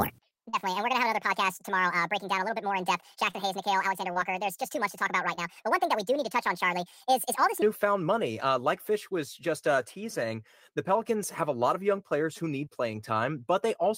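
From the start to 7.62 s, the speech plays as a section at the wrong speed: it runs 1.62 times faster than normal, with pitch raised about seven semitones, so voices sound high and hurried. Because speed and pitch shift together, the likely cause is playback or editing against the wrong clock rather than deliberate pitch processing. At 7.62 s the speech returns to its natural rate and pitch.

Short concealed packet loss occurs at 0.49 to 0.55 s, 3.31 to 3.35 s, 4.13 to 4.17 s and 5.35 to 5.39 s, all within the sped-up section, and again at 12.65 to 12.68 s. Each time, 20 to 40 ms of audio failed to arrive, which fits the loss of one or two 20 ms packets. The decoder extended the preceding sound to fill between 13 and 36 ms before blending back into the real signal, so each event is heard as a brief smear or wobble.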